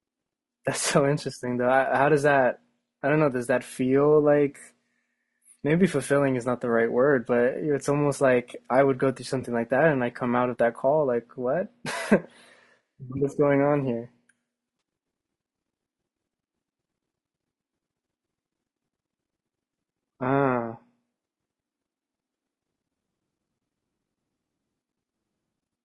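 Across the whole speech clip the voice has a rough, grainy texture, with a hiss of noise filling the gaps between the pitch harmonics and a top band that sounds thinned and synthetic. This is likely low-delay AAC compression of the AAC-ELD kind used in video calls. Its very short frames resolve the harmonics poorly and spend bits quickly, and the plainly audible damage fits a low rate of around 32 kbps.

At 9.41–9.44 s, 13.17–13.20 s and 14.79–14.81 s there are brief smeared, phasey patches where the sound loses its definition for a moment and then snaps back. These are AAC frame loss with concealment. Each gap is about 20 ms, which points to a single lost frame. The decoder rebuilt it from the previous good spectrum, so each dropout comes out as a blurred, noisy stand-in rather than a hard hole.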